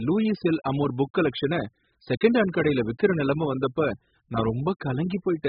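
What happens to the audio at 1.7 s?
At 1.7 s the speech is dull and smeared, with nothing above 5 kHz and a fizzy, warbling texture on sibilants. This runs through the whole clip and is likely heavy AAC compression at a very low bitrate, around 8 kbps, which lowers the cut-off and leaves holes in the spectrum.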